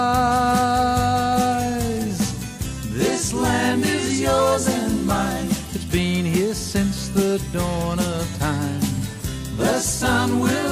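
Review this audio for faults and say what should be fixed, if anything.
No faults can be heard anywhere in the recording. Nothing needs to be fixed.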